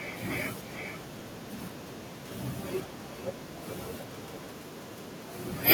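Throughout the speech, an echo with no canceller is audible. Each phrase returns about 14 dB quieter, roughly 0.4 s later, thinner, picked up from the far loudspeaker.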